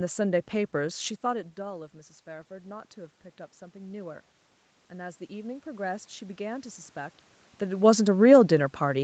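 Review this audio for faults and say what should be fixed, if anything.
Automatic gain rising occurs from 4.88 to 7.24 s. The input level dropped by about 16 dB, and the call's gain control answered by raising its gain about 5 dB gradually over those 2.4 s. Speech and room noise swell together, so the background comes up as much as the speech. On a waveform the envelope widens steadily across that span. On a spectrogram the whole band brightens slowly, noise floor included. The shifts near 1 s and 7.5 s come from the talker moving. To prevent it, cap or slow the gain control's upward adjustment and keep the talker at a steady distance from the microphone.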